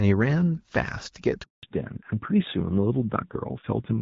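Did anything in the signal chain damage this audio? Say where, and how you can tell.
Yes. At 1.43 s the speech dies away and stays silent for 200 ms, until 1.63 s. This is a handover gap at the network stage: the call moved between networks, no speech frames arrived during the switch, and that stretch is simply lost.

From 1.63 s to the end, the speech is duller and rougher, with nothing above 4 kHz. This is a fallback to narrowband at the codec stage. The call left the HD Voice (AMR-WB) codec for an older narrowband codec, and the roughness fits a low rate near 7.4 kbit/s.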